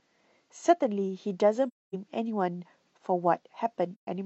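From 1.67 to 1.95 s and again from 3.94 to 4.08 s the speech drops into silence, an AAC frame loss with muting. The decoder zeroed the missing frames' spectrum, so overlapping windows fade the sound out and back in. Spectrograms show blank vertical bands, waveforms tapered gaps.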